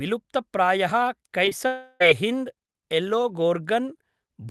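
At 1.45 s the speech briefly smears and wobbles, twice in a row, from 1.45 to 1.49 s and again from 1.49 to 1.53 s. These are short concealed packet losses: about 20 ms of audio failed to reach the decoder in time on each occasion, and the receiver bridged each gap with roughly 17 ms of sound extrapolated from what came just before, then blended back into the real signal.

From 1.67 to 2.02 s the speech gives way to a synthetic continuation of the last sound, a buzzing or hissing tail that fades rather than cutting to silence, before the real audio resumes further along. This is most likely a long network dropout, in which about 340 ms of audio never arrived. The receiver papered over roughly 330 ms of that stretch by prolonging the preceding sound, and the words that fell inside the gap are simply gone. Across the clip the Opus call path's coding noise and its upper limit near 12 kHz can be heard.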